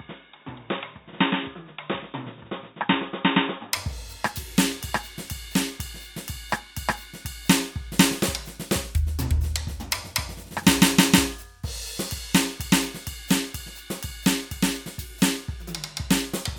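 Input switched to a poorer device, 0.0 to 3.73 s: the music is dull and boxy with nothing above 3.8 kHz, slightly quieter, and carries faint added background noise, likely from a lower-grade microphone until the input changes.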